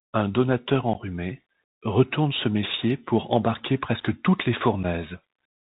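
Speech, carried over a Bluetooth CVSD headset codec throughout, with plainly audible damage. The audio is cut off near 4 kHz. Sibilants sound scratchy, loud bright sounds distort, and a grainy hiss sits underneath. This fits a 64 kbps one-bit delta link whose step size cannot keep up. Two dropouts are unconcealed Bluetooth headset packet loss. The first runs from 0.93 to 0.96 s and sounds like a couple of lost packets. The second runs from 4.83 to 4.85 s, just after "embarquer presque toutes les", and sounds like one lost packet. Each is a short, hard-edged hole, and the speech returns briefly quieter.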